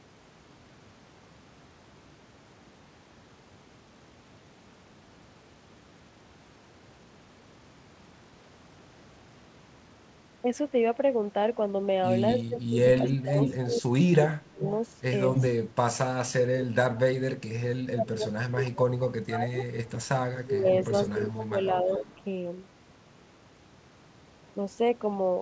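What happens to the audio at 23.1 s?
At 23.1 s the speech carries on intact, with nothing audible beyond the call path's normal character, including its upper limit of about 8 kHz.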